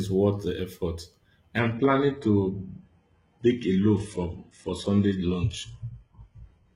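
An adaptive stream at a lower bitrate takes over at 1.58 s in this speech clip, right after "worth the effort," and lasts to the end. With no gap, the audio abruptly loses its top end, with nothing above 11.1 kHz, and codec artefacts rise. This fits the player dropping from a 96 kbit/s AAC-LC stream to a 12 kbit/s HE-AAC one because the connection slowed.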